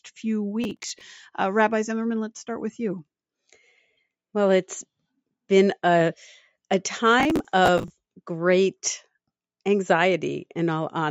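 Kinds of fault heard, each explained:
Processor overload crackle, 0.64 to 1.01 s and 7.20 to 7.90 s: the processing could not finish its short audio blocks in time, so a run of deadlines slipped and each miss was filled by replaying a scrap of old audio with hard edges. Those abrupt repeats stack into a gritty, tearing crackle over the sound. The grain fits blocks of around 10 ms, with roughly ten misses in the first burst and twenty in the longer second.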